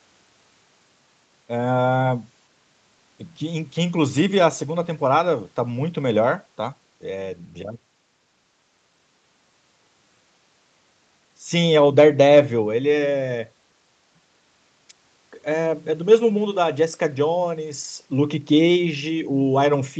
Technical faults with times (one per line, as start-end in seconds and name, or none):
none